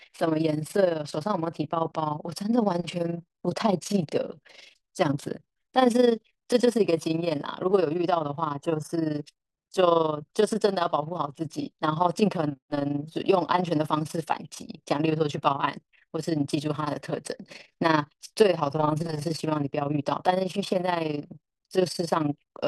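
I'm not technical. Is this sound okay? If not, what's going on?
No. Overlap-add ripple runs through the whole speech clip: the volume pulses about twenty times a second, a rapid robotic flutter that never stops, unlike brief dropouts.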